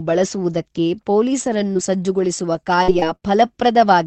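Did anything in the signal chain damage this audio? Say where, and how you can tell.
Yes: repeated packet loss (robotic sound) on the network, 1.45 to 3.24 s. Four holes, the longest 62 ms, were each filled by stretching the preceding sound, so the speech turns choppy, with pieces missing.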